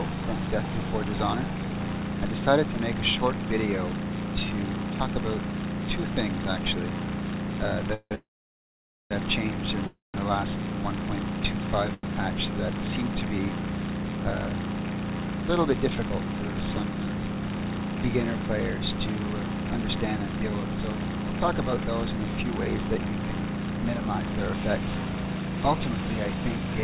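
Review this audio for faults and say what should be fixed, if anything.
Three call audio freezes occur at 7.94 to 8.13 s, 8.15 to 9.13 s and 9.87 to 10.16 s. Each time the last sound is carried on as a fading buzz, then goes silent for 60 ms, 870 ms and 170 ms, likely because delayed packets left the jitter buffer empty. Unlike a dropout, the audio resumes exactly where it stopped, so nothing is lost, but about 0.17, 0.96 and 0.27 s of delay is added.

A short stall from a late packet at 11.94 to 12.05 s holds the current sound for 93 ms and then continues from the same point. It is told apart from the freezes by its brevity and because it never fades to silence.

A jitter buffer speed-up runs from 15.67 to 17.57 s, playing at 113% speed while the pitch stays the same. Roughly 0.3 s is trimmed in small pitch-period pieces to work off the backlog. The unchanged pitch separates it from a resampling or clock error, which would shift pitch along with speed.

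Over the whole clip, nothing is present above 4 kHz, which fits a 64 kbps G.711 mu-law call path.

To prevent these faults, fix the network delay spikes feeding the receiver, or allow a larger jitter buffer target so late packets arrive before playout runs dry.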